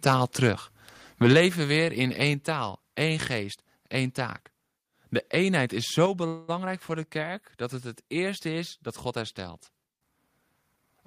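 From 1.23 to 1.41 s the loudest syllables turn harsh and crackly, most likely from microphone overload. The input runs about 4 dB past what the converter can represent, so the peak tops are sliced flat, affecting roughly one sample in twenty. Clipping distorts the waveform while the level stays put, which separates it from a volume change. The crackle rides on the peaks themselves and does not sound like a drop in loudness.

At 1.33 s, in the middle of that distorted stretch, the whole sound falls abruptly by about 4 dB. This is likely a microphone volume stepped down, with the call software cutting the device's input gain in one move because the input was overloading. A second drop of about 4 dB follows at 2.34 s. Each is a clean, single step in which background and foreground sink together, with no gradual fade and no added distortion.

A briefer microphone overload, likely again, roughs up the peaks from 6.01 to 6.03 s, sitting right at the converter's limit with roughly one sample in a hundred flattened. 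It is followed at 6.06 s by another microphone volume stepped down of about 5 dB, likely the software reacting to it.

From 6.27 to 6.50 s comes a call audio freeze, likely caused by late packets draining the jitter buffer. For 208 ms the receiver stretches the last sound into a fading buzz or hiss with no true silence. Then the audio picks up where it stopped, so nothing is lost and the rest of the clip runs 208 ms later. Unlike a dropout, it inserts time instead of removing any.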